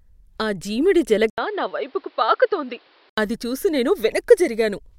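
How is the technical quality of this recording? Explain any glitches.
The quality is uneven. One stretch sounds clearly worse. From 1.30 to 3.18 s the input likely switched to a poorer device. An 80 ms silence marks the change. Nothing above 5.5 kHz gets through, so the speech turns dull and boxy. It also drops somewhat in level and picks up a faint new background noise. Then the fuller sound returns.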